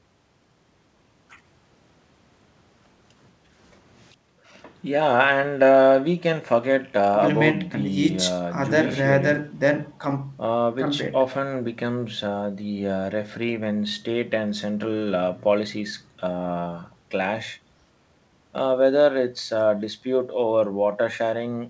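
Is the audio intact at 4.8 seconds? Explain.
Yes, the audio is intact at 4.8 seconds: the speech passes cleanly through the call path, whose band ends at about 8 kHz, as fits a G.722 wideband codec.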